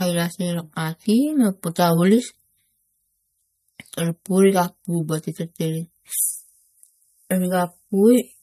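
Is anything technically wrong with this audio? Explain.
Yes. Throughout the clip, the speech shows MP3 compression damage that is plainly audible. The likely cause is an encoder starved of bits, consistent with roughly 47 kbps. It removes the top of the spectrum entirely, so nothing remains above 13.9 kHz. It also discards weaker frequency components that flicker in and out between frames. The result is a watery, swirling texture, with metallic chirps on s sounds and softened, smeared consonant onsets.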